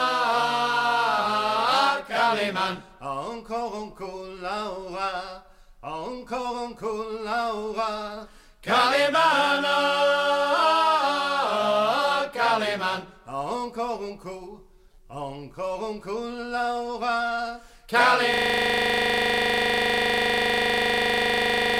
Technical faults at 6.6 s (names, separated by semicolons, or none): none